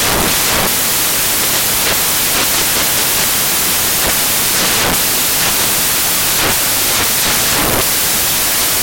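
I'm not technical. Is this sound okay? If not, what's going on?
No. From start to finish it sounds like loud hiss, as if the real sound were buried under static. These are samples built from the wrong bytes: the player assembles each sound value from its pieces wrongly, so tiny jittery details become huge swings.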